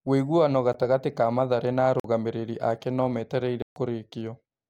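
At 0.73 s, 2.00 to 2.04 s and 3.62 to 3.76 s, the speech drops into a block of digital silence, where samples are replaced by zeros with no fade. The 13 ms gap is a tick, the 46 ms gap (consistent with a 2048-sample buffer) is longer, and the 139 ms gap is a short hole.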